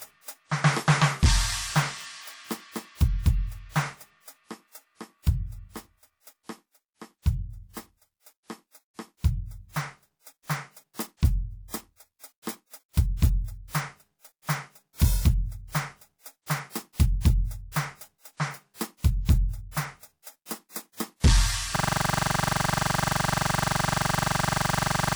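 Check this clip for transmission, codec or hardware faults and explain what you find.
Two faults are present: a persistent codec problem throughout the music, and a hang loop that takes over the final seconds.

Low-bitrate audio saved at a high bitrate: throughout, the sound carries the coding artefacts of an earlier low-bitrate encoding, likely from a 64 kbit/s WMA file re-encoded as 243 kbit/s MP3. A spectrogram shows content stopping at about 20.2 kHz.

System hang loop: from 21.76 s to the end, one 42.67 ms fragment repeats about 80 times, fitting a 2048-sample buffer. It produces a 23.4 Hz buzzing stutter, and the waveform shows identical repeating blocks.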